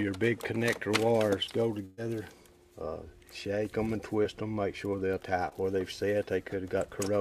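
At 1.85 s the sound turns into a held, fading continuation for about 0.14 s before jumping ahead to resume at 1.99 s. This is a burst of packet loss: roughly 120 ms of audio never arrived in time, so the receiver stretched the last sound across about 119 ms of the hole, turning it down as it went, with no outright silence. When real audio returned, the missing stretch was simply skipped.

Two much briefer blips follow, each a quick smear or wobble rather than a gap. The first runs from 4.23 to 4.27 s and the second from 5.49 to 5.53 s. Both are short concealed packet loss, each covering about 20 ms of missing audio. The decoder patched the first hole with roughly 14 ms of continued sound and the second with about 25 ms, then blended back into the real signal. Those patches are what make each moment sound briefly blurred.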